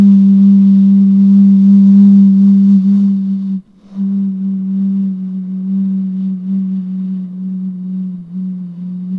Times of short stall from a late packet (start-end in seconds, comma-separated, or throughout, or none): none